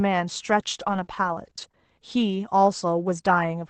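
Speech over a call codec limited to about 8 kHz, with repeated packet loss (robotic sound) from 0.83 to 1.89 s: six short gaps, each 40 ms or less, patched by stretching earlier sound. The result is choppy rather than one clean dropout.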